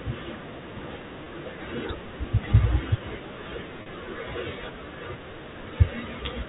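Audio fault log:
1.24–1.26 s and 3.82–3.86 s: packet loss with pitch repetition. 20 ms and 40 ms gaps, fitting one and two lost packets, are bridged by repeating the last pitch period, heard as brief buzzy holds.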